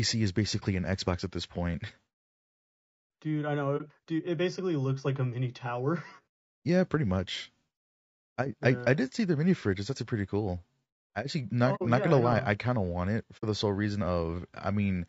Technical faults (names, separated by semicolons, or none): low-delay AAC compression; AAC frame loss with muting